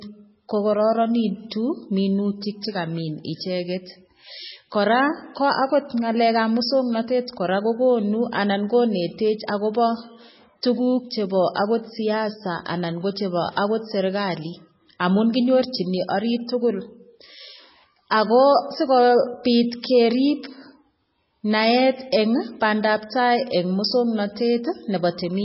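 An encoder starved of bits, most likely MP3 compression at a very low rate, the kind a setting near 16 kbps produces, has run through the whole speech clip. Short of bits, it removes all treble above 5.6 kHz and drops weak frequency lines that then flicker in and out between frames. The result is dull, band-limited speech with a watery, swirling texture, metallic chirps on s sounds and consonant attacks that blur instead of landing cleanly.

At 18.10 s a pre-echo appears. A sharp attack falls late in a codec block, and the quantisation noise scaled for that loud onset spreads back across the quiet moment just before it, about 11 ms earlier. That spreading puts a brief hiss ahead of the attack, so the onset sounds softened and smeared rather than crisp.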